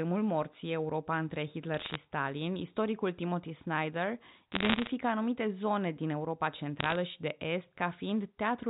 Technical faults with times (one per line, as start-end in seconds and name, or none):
1.74-1.96 bit errors on a digital phone line
4.52-4.91 bit errors on a digital phone line
6.79-6.96 bit errors on a digital phone line